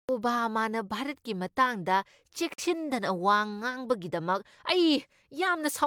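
At 2.54 s the speech cuts out in a digital broadcast dropout, returning by 2.63 s. The receiver muted after a corrupted or missing frame, fading down in about 3 ms and leaving a hole of roughly 43 ms, which fits a single lost frame.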